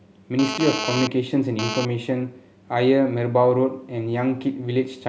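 Speech, with GSM phone buzz from 0.39 to 1.85 s, a nearby 2G phone's data-transfer bursts rectified into a raspy 217 Hz buzz about 5 dB below the speech. Unlike mains hum, it is harsh and harmonic-rich, and it comes and goes.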